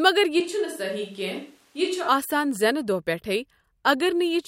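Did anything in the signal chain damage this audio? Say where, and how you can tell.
Yes: a switch to a distant microphone at the analogue input, 0.40 to 2.08 s. The speech abruptly turns roomy, thinner and about 5 dB quieter, likely because the close mic dropped out.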